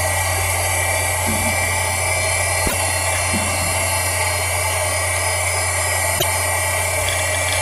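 At 2.65 to 2.73 s and 6.15 to 6.24 s, damaged data in the compressed stream makes the decoder misread frames and lose sync. Each gives a brief glitch.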